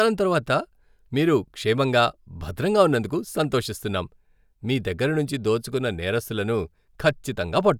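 No faults can be heard anywhere in the recording.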